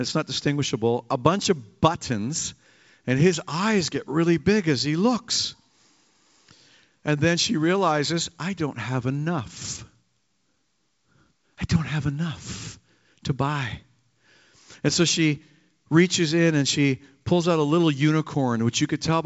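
No technical faults are audible.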